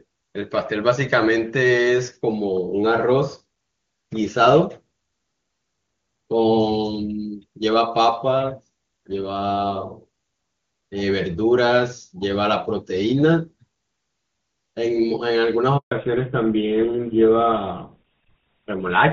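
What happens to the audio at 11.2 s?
Nothing goes wrong at 11.2 s: the speech carries on intact through the AMR wideband (HD Voice) codec, whose high rate leaves no audible damage at that moment.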